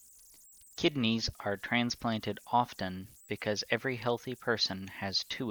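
From start to end, the speech carries converter idle tones: an undithered delta-sigma converter settles into repeating bit patterns at low levels, leaving a whistle around 7 kHz, about 28 dB below the signal, most audible in pauses. A spectrogram shows a thin horizontal line there.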